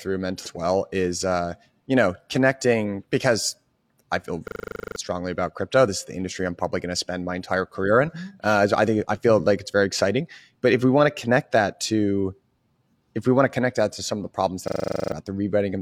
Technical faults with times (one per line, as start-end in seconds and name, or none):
0.42-0.48 damaged data in a compressed stream
4.48-4.96 system hang loop
14.68-15.12 system hang loop